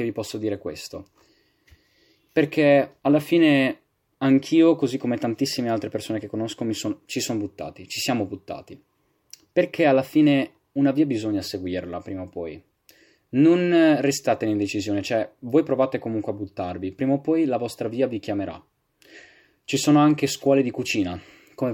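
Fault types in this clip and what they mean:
No audible faults detected.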